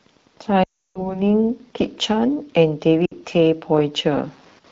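A faint, steady ticking runs under this speech recording from start to finish, about ten clicks a second and roughly 40 dB below the speech. That is Wi-Fi interference: a nearby Wi-Fi radio's beacon, repeating every 102.4 ms, is being picked up and rectified by the audio circuitry. The speech also briefly fades into silence from 0.63 to 1.17 s, and again, more briefly, from 3.06 to 3.13 s. These are lost AMR speech frames. Radio errors corrupted the frames, so the decoder stretched out the last good pitch and vocal-tract settings while lowering the gain. The first gap loses about 320 ms of speech, which fits a long run of consecutive 20 ms frames. The second loses about 60 ms and fits just a few. The fade is quick, as expected for wideband. The speech carries the light, slightly processed quality of the AMR wideband (HD Voice) codec.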